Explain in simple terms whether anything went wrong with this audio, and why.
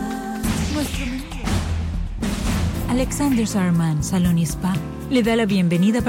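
Nothing stood out as wrong when listening to this audio.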